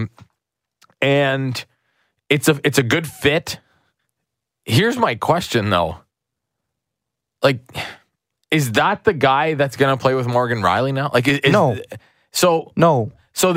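No technical faults can be heard anywhere in the speech recording, and the signal stays intact throughout.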